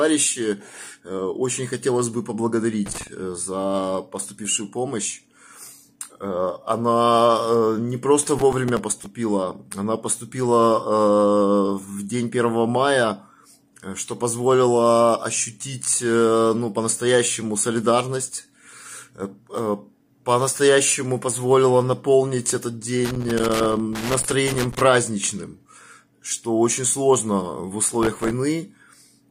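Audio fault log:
2.86–3.07 s and 23.05–24.83 s: loose connector crackle. A worn contact is making and breaking as it shifts, chopping the signal at random. The spacing is irregular and scratchy, unlike processor crackle's steady buffer-sized grain. The second burst lasts nearly 2 s.
8.23–9.06 s and 27.84–28.31 s: processor overload crackle. The processor misses a long run of deadlines, about 20 the first time and 30 the second. Each miss replays a sliver of old audio with hard edges. The gritty tearing has an even, fine grain that fits buffers of roughly 3 ms, unlike a connector's random scratching.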